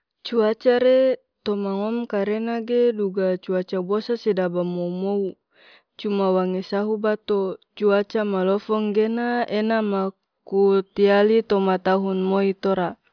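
Nothing here trips the ear as a technical fault, so there's no point in the recording where anything seems to have gone wrong.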